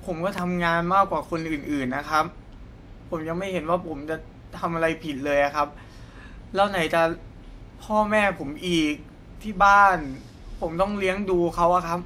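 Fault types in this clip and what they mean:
Loud pop: one sharp pop from 0.38 to 0.40 s, likely a sudden voltage pulse entering the signal chain, peaking about 15 dB above the speech, which carries on beneath it. The waveform shows a tall narrow spike, the spectrogram a thin full-band vertical stripe.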